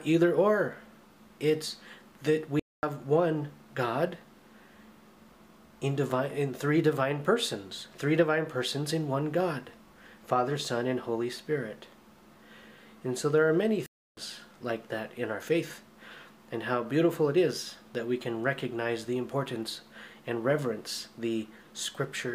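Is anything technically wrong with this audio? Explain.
Yes. There are two playback stalls: output drops to silence from 2.60 to 2.83 s (about 235 ms) and from 13.86 to 14.17 s (about 308 ms), breaking the sound mid-flow before it resumes. The likely cause is the player briefly running out of buffered data or its thread being blocked.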